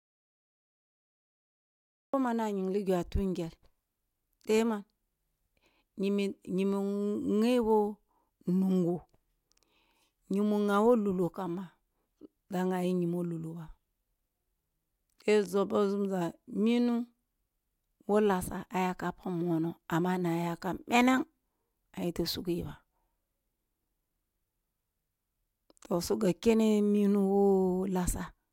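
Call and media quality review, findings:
Audio dropout to silence, 0.00–2.14 s: clip opens in dead silence, no room tone, speech starts abruptly. Likely input loss upstream, with the recorder writing silence.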